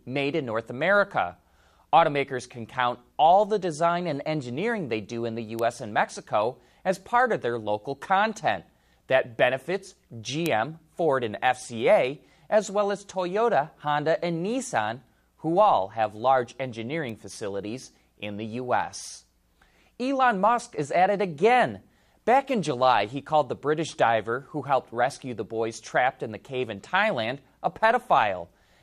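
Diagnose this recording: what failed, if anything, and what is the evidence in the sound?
Single bits flipped in the digital path, in storage or on a digital link, producing three bit error spikes in this speech. Each is one corrupted sample, where the value jumps by a power of two and snaps back. Each is heard as an isolated broadband tick: at 5.59 s after "they do in the", peaking about -10 dBFS; at 10.46 s, loudest at about -4 dBFS; and at 17.10 s between "who all have large" and "facilities in the", at about -22 dBFS.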